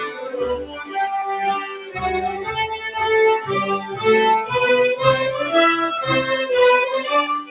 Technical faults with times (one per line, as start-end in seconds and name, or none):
0.00-7.51 noise suppressor applied to music or sounds
0.03-0.33 sound cut by the noise suppressor
0.62-0.96 sound cut by the noise suppressor
1.61-2.00 sound cut by the noise suppressor
3.79-4.04 sound cut by the noise suppressor